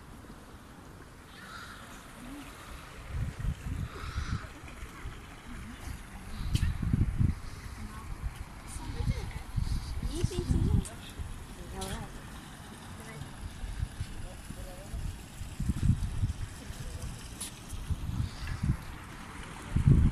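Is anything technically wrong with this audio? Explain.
No, nothing technically wrong turns up anywhere in this audio on listening.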